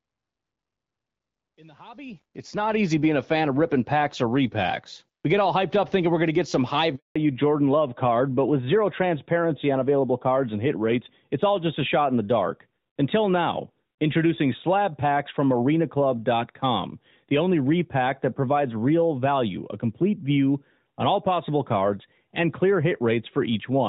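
Speech over a phone call here, carrying the light, clean sound you'd expect from HD Voice at a rate that fits roughly 12.65 kbit/s. Then at 6.96 s, right after "to get some high", there's a handover gap: the call switches networks, no speech frames make it through, and the sound drops out for 200 ms until 7.16 s while the new link comes up. Whatever was said in that stretch is simply gone. When audio comes back, it has picked up a fallback to narrowband that lasts to the end. The call has dropped from AMR-WB to the older AMR-NB codec, at a rate consistent with 12.2 kbit/s, so nothing above 4 kHz survives. The top end that gave the speech its crispness disappears, and the rest of the clip sounds duller and rougher than the first seven seconds.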